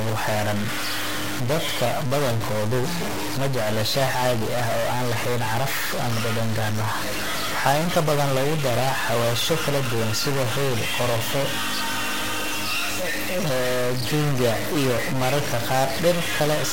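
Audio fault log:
Throughout, stuck bit: the speech carries a distortion that follows the waveform rather than sitting on top of it, and the pauses between phrases fill with noise instead of falling silent. The likely cause is one data bit held permanently at 0 or 1 by a broken line or converter, so roughly half the sample values are pushed off by that bit's weight, and the stuck bit's effect changes with the sign of small values near zero.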